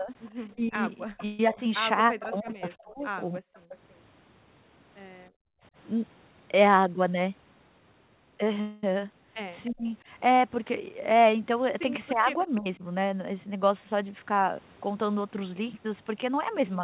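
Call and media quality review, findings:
Speech suppressed in double talk, 0.0–3.41 s, 9.69–9.91 s, 12.13–12.83 s: talker dips up to about 30 dB (about 10 dB at 12.13 s), likely echo canceller attenuating both sides together. Unlike gating, the talker, not room sound, drops.

Echo leak, 0.25–2.53 s and 3.54–3.77 s (331 ms delay, about 20 dB down), 9.65–9.73 s (307 ms, about 30 dB down): delayed copy of the voice, likely residual loudspeaker echo passing the canceller. A fixed-lag repeat sets it apart from reverb.

Call audio freeze, 1.25–1.40 s (139 ms) and 8.61–8.84 s (218 ms): last sound stretched into a fading buzz, likely jitter buffer underrun from late packets. Nothing is lost afterward and the audio resumes where it stopped, unlike a dropout.

Background gated by the echo canceller, 5.30–5.63 s: room noise drops about 39 dB, then returns. The mic is clamped while the loudspeaker plays, and only the background vanishes, not the talker.

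Jitter buffer speed-up, 6.77–7.28 s at 110%, 12.95–14.96 s at 106%, 15.52–16.76 s at 105%: hurried delivery at unchanged pitch, pitch-period chunks removed to drain an overfull buffer. Pitch stays fixed, unlike a resampling error.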